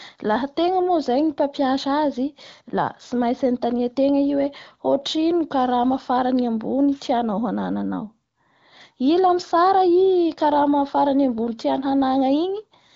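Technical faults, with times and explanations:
No technical faults can be heard in this speech clip. It has the sound of AMR wideband (HD Voice) coding at a rate that fits about 18 kbit/s, with no detail above roughly 7.6 kHz and little or no audible codec damage.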